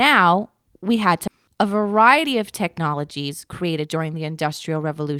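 It's a short speech clip with two problems. At about 1.27 to 1.29 s there's a skip ahead: roughly a second of speech is simply gone, and playback jumps straight to later audio with no gap or fill between the two sides. That points to a block of packets lost in transit or thrown out when the jitter buffer overflowed, so the delay drops by about a second in one go. Right after that, the jitter buffer speed-up kicks in twice, from 1.48 to 2.34 s at 111% speed, trimming roughly a tenth of a second, then from 2.79 to 5.14 s at 116%, trimming around 400 ms. The receiver is snipping out tiny pitch-period-sized slices over and over to work off excess buffered delay, so the talker sounds rushed while the pitch stays put.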